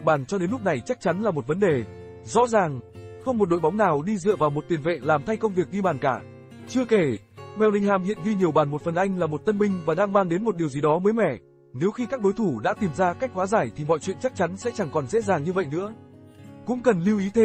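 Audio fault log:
No technical fault can be heard anywhere in this audio; the signal stays continuous throughout.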